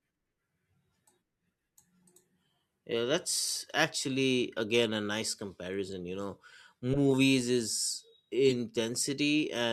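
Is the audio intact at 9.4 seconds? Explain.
Yes, the speech at 9.4 seconds comes through intact, with no audible fault at that moment.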